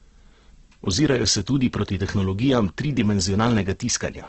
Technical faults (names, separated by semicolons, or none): Opus compression